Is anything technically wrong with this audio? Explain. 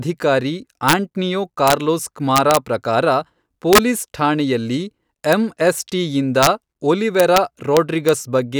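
Yes. The speech has integer overflow. A gain or sum is exceeding the largest integer and wrapping to the opposite sign instead of being limited. Each such peak, pushed over by about 0 to 3 dB, flips across the full range, giving violent cracks far sharper than clipping at 0.89–0.93, 1.68–1.73, 2.36–2.57, 3.73–3.78, 5.33, 6.43–6.47, 7.20–7.38 and 7.77–8.09 s.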